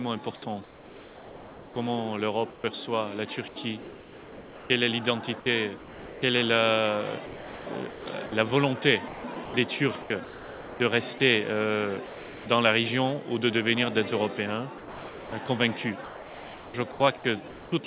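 From 0.64 to 2.64 s, the sender likely stopped transmitting during a pause and the receiver generated comfort noise in place of the background, about 1.26 s of it in total. The real ambience, heard through a band that stops at 4 kHz, gives way to a smooth, even hiss without the texture of the surrounding background. It then returns when transmission resumes.

The sound is chopped by the voice detector in three stretches. From 3.48 to 6.22 s, the detector likely toggled between sending and muting several times, so about 1.46 s was replaced. From 7.26 to 11.2 s, about 1.56 s was replaced, and from 14.78 to 17.72 s, about 1.64 s. Each time, the sound has two or more holes filled with synthetic noise, giving a stuttering, gated texture.

Between 12.06 and 12.46 s, the sound is dropped by the voice detector. The detector likely mistook a quiet passage for background and halted transmission, so about 0.39 s of real sound is missing. 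In its place there is 0.4 s of featureless noise before the audio picks up again as the detector retriggers.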